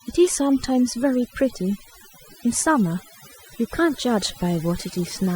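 A speech recording with overdone noise removal throughout. The background drops to near silence scattered with twinkling specks, and quiet parts of the voice were cut along with the noise. On a spectrogram the noise floor looks blotchy, with isolated bright dots and missing patches in the upper harmonics. Faint regular ticks, clock slip clicks, run from 0.66 to 4.84 s, about seven of them roughly every 0.7 s. Each is a single dropped or repeated sample, likely from two unsynchronised clocks about 40 ppm apart. They show as thin vertical lines on a spectrogram and tiny steps in the waveform.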